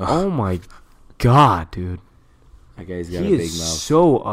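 No technical faults occur at any point in the speech, so there is nothing to describe in time order.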